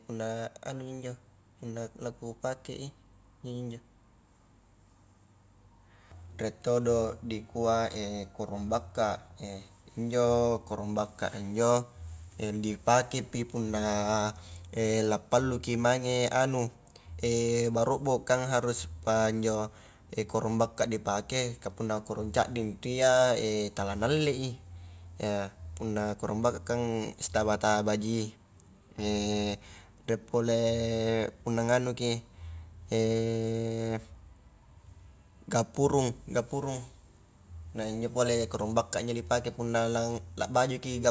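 No technical faults are audible.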